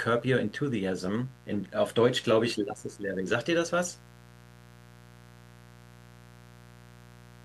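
A mains buzz runs through the whole speech clip. Sharp switching spikes from the 60 Hz supply leak in twice per cycle. Their harmonics climb to several kHz. The result is a steady, raspy buzz, roughly 25 dB below the speech.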